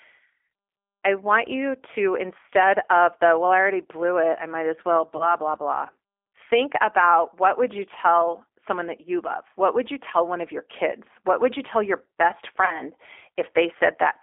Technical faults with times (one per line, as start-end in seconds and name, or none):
0.00-14.22 G.729 codec
5.17-5.36 VoIP packet loss concealed by the speech codec
12.65-12.81 VoIP packet loss concealed by the speech codec